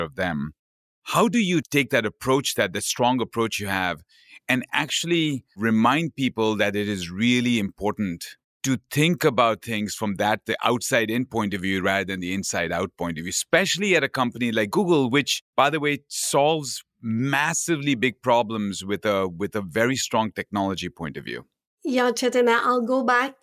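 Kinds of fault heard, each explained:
No technical faults turn up anywhere in this speech recording, so there's nothing to flag here.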